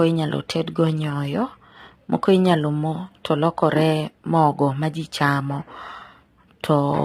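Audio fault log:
throughout, low-delay AAC compression: the speech has likely gone through a low-delay AAC coder of the sort used for video calls, and the heavy damage points to a low rate of around 24 kbps. Its very short frames cannot pull the voice's harmonics apart cleanly, so noise seeps into the gaps between them. The speech comes out rough and grainy, and the upper band sounds dulled or artificially rebuilt.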